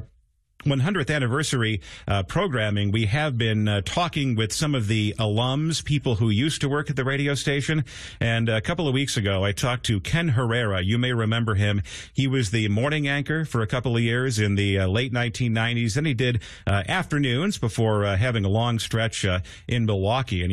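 Damaged data in a compressed stream at 9.88 s: part of the encoded audio is corrupt, so the decoder misreads the affected frame, loses sync and searches for the next valid frame header. The result is a brief glitch in the sound.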